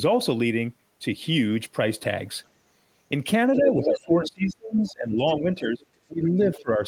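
From 3.54 to 3.98 s, a second voice sits about 10 dB under the talker: the other side's voice leaking through, likely loudspeaker echo the canceller left behind. It returns in shorter, quieter scraps at 4.25 to 4.30 s (about 15 dB down), 4.87 to 4.92 s, 5.26 to 5.33 s and 6.55 to 6.62 s (roughly 25 to 30 dB down). Unlike a level dip, this adds sound.

Overlapping it is speech suppressed in double talk, where the talker's own voice drops away. The likely cause is the canceller ducking everything while both sides spoke. This happens from 3.57 to 5.19 s (up to about 25 dB), 5.37 to 5.83 s (about 10 dB) and 6.06 to 6.80 s (about 20 dB). It removes sound instead of adding it.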